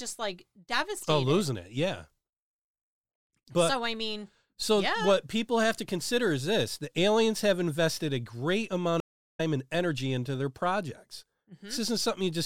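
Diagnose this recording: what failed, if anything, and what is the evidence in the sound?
A stream reconnect at the network stage: after "have invested a great", the speech drops to a blank 385 ms gap from 9.00 to 9.41 s on the waveform and spectrogram. It resumes about a third of a second later at "and energy into their" as a fresh decoder starts mid-stream.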